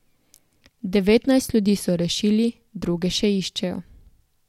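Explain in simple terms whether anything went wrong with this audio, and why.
Nothing went wrong with this audio, so there is no fault here to explain.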